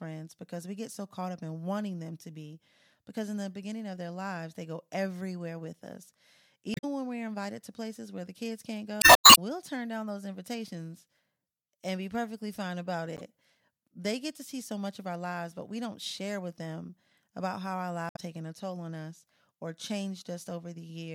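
Damaged data in the compressed stream makes the decoder lose sync, giving short glitches at 6.73–6.84 s, 8.99–9.32 s (between "where the kids can't" and "turn down those invitations"), 13.17–13.21 s after "be perfectly fine about", and 18.09–18.19 s (between "them about how our" and "taken a toll on").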